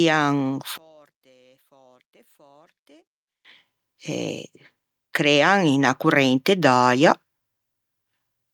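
From 0.78 s to 3.45 s the speech nearly vanishes, dropping about 35 dB. One channel inverted is the likely cause, cancelling centred sound in mono. From 5.17 s to 7.2 s, automatic gain rising lifts voice and background together. The gain climbs by about 5 dB, gradually over two seconds.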